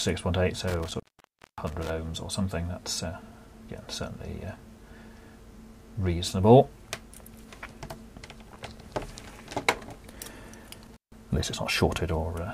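At 0.68 s the sound drops out abruptly with crackle at the break, stays gone for about 0.58 s apart from a faint hiss, then crackles back before settling by 1.90 s. The same thing happens more briefly from 10.86 to 11.18 s, with a gap of about 0.15 s. This is intermittent contact: a loose plug or cable momentarily losing its connection, so the signal path opens and only residual noise gets through.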